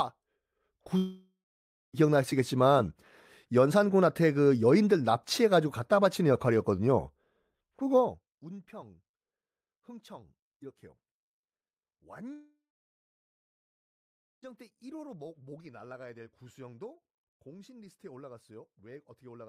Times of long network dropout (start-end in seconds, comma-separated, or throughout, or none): 0.97-1.95, 12.33-14.44